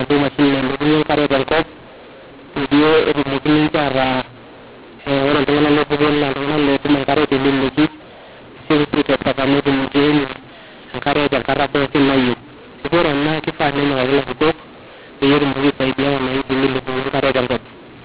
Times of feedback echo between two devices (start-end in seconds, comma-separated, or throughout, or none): none